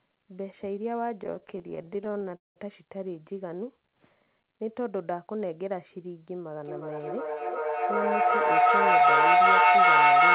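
From 1.24 to 2.58 s the speech breaks into repeated stalls (stutter). Packets arrived late, the jitter buffer kept running dry, and the receiver stretched the last sound to fill about 27 short gaps, the longest 192 ms, which is roughly a third of that stretch. Nothing is lost, but the speech catches and drags.

Between 3.82 and 4.73 s a jitter buffer slow-down follows. Rebuilding its reserve, the receiver repeated single pitch periods and slices of pause, adding 105 ms. That passage plays at 89% speed with unchanged pitch, so sounds are drawn out.

From 6.57 s to the end, feedback echo between two devices takes over. One device replays the other's microphone feed into the same room, and that microphone picks it up again. Each phrase returns roughly every 0.4 s, thinner and more ringing. The loop gets loud enough, peaking about 14 dB above the speech, that the repeats pile up rather than decay. 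Throughout, the band stops at 4 kHz, consistent with G.711 mu-law at 64 kbps.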